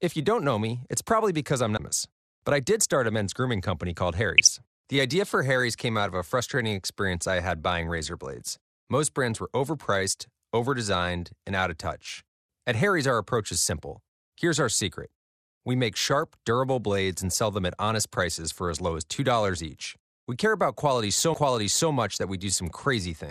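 MP2 compression runs throughout the speech, with a dull, band-limited top and a granular, gurgling grain. This is likely the work of MPEG Layer II coding at a rate that fits roughly 80 kbps. That rate leaves too few bits for all 32 sub-bands, so upper bands drop out or flicker while the remaining ones are coarsely quantised. The damage is plainly audible.

A CD skip comes at 1.77 s, just after "it's probably because I'm". There is a mute of about 20 ms, and then the sound resumes from a different point. The laser has jumped to another turn of the spiral, so the audio lurches forward or back by one or more turns. The same fault returns at 21.34 s, this time with a mute of about 15 ms.

DAB burbling breaks out at 4.38 to 4.51 s, right after "men's grooming company called". It returns at 6.12 to 6.20 s, 8.50 to 8.58 s, 13.55 to 13.72 s, 17.24 s, and 19.49 to 19.58 s, the last just after "for as low as". 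Bit errors from weak reception slip past error correction into the MP2 stream. Corrupted samples put short blips of noise in single sub-bands, and corrupted scale factors make sub-bands jump in level, which is heard as brief burbling blips.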